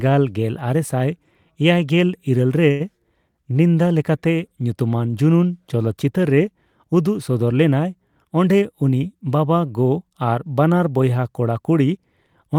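A short stall from a late packet occurs at 2.71 to 2.82 s, right after "ᱤᱨᱟᱹᱞ ᱨᱮ". A packet arrived late, the jitter buffer emptied, and the receiver stretched the last sound for 85 ms before resuming, adding that much delay. The result is a held sound with a faint buzz or dip.

A jitter buffer speed-up follows at 8.55 to 9.25 s, just before "ᱵᱟᱵᱟᱼᱜᱚ ᱟᱨ ᱵᱟᱱᱟᱨ ᱵᱚᱭᱦᱟ". To shed the excess delay, the receiver trimmed pitch-period slices, about a tenth of a second in all. The speech runs at 112% speed without any pitch change, so it sounds briefly hurried.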